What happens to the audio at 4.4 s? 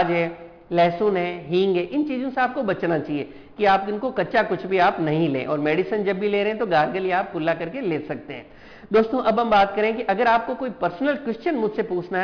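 At 4.4 s the audio carries aliasing, which runs through the whole clip rather than starting there. The content above 5.5 kHz was not filtered out before the rate dropped, which fits a resample to about 11 kHz. Those high frequencies fold back below 5.5 kHz as unrelated, inharmonic tones, faint at roughly 30 dB under the signal, giving a gritty, metallic edge. A plain low-pass would sound dull but clean. Here the spectrum stops hard at 5.5 kHz yet still hisses with wrong pitches.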